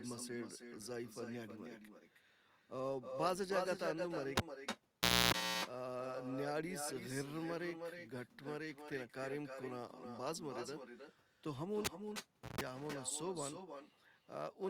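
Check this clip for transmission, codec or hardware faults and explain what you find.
Two faults are present in this speech recording.

Echo with no canceller runs throughout: the far end's loudspeaker feeds its microphone unchecked, so every phrase returns roughly a third of a second later, about 6 dB quieter and thin.

Cable pulled and plugged in occurs at 4.37–5.34 s and 11.85–12.61 s: a live lead is yanked and reinserted, giving a pop, about 0.91 s and 0.71 s of near silence, then 60 Hz buzz lasting 0.28 s and 0.15 s before a second pop.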